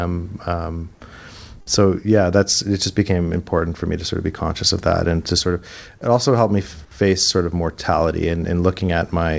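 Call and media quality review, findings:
Burst of packet loss, 1.61–1.69 s: consecutive packets lost or late at the jitter buffer. Concealment stretched the last speech sound about 52 ms and faded it out, then playback jumped ahead, with 60 ms of speech skipped. G.722 band limit at 8 kHz throughout.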